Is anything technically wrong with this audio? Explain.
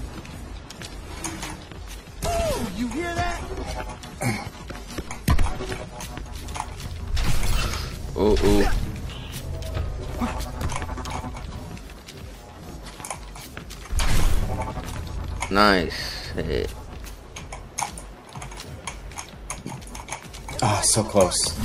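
Yes. From 0.0 to 6.0 s the adaptive stream starts at a low bitrate: treble is absent above 14 kHz with heavier artefacts, fitting roughly 32 kbit/s AAC, until the player measures the connection and switches to a better rendition, fitting 96 kbit/s. Unlike a dropout, the improvement is sudden and gapless.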